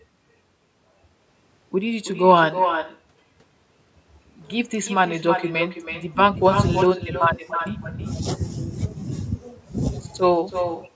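From start to finish the speech is followed by an echo with no canceller: each phrase returns roughly a third of a second later, about 7 dB quieter and thinner. At the far end the call plays through a loudspeaker, the microphone picks it up, and nothing removes it, so the copy rides the network round trip back. Unlike room reverberation, which smears into a continuous tail, this is a distinct, delayed repeat, heard within the call audio's band that stops near 8 kHz.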